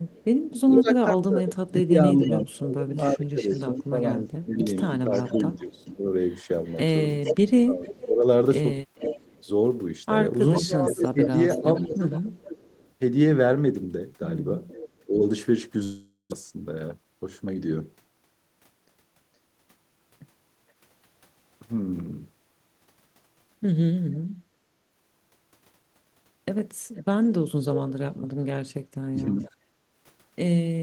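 From 0.07 to 14.89 s a faint second copy of the speech trails the main talker by about 460 ms, roughly 10 dB quieter. This echo leak likely comes from a far-end loudspeaker whose echo canceller let part of the returning sound through and sent it back.

Between 0.77 and 12.02 s the talker repeatedly dips, by as much as about 20 dB, for around four seconds in total, losing clarity in pieces. That is speech suppressed in double talk, likely because the canceller, facing both sides at once, turned everything down. A brief repeat at 15.06 to 15.2 s dips about 10 dB.

At 15.83 s the sound smears into a fading buzz for nearly half a second, then goes briefly silent, and resumes at 16.34 s with about 400 ms missing. This is a long network dropout, likely with no packets arriving, while the receiver stretched the last sound to cover the gap.

From 16.97 to 17.56 s the speech sounds hurried at unchanged pitch, running at 109% speed. 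The jitter buffer sped up, trimming short pitch-period pieces, about 50 ms in all, to work off the extra delay built up after the gap.

The echo leak returns from 26.96 s to the end at 30.82 s, again trailing by about 470 ms and roughly 10 dB down. Inside it, 29.10 to 29.37 s brings a sharp dip in the talker, about 30 dB at worst, another instance of speech suppressed in double talk.

From 29.63 s to the end the room tone sinks by up to 12 dB while the loudspeaker plays. This is background gated by the echo canceller, which pulled the microphone down hard during playback, so the ambience drops away instead of holding steady.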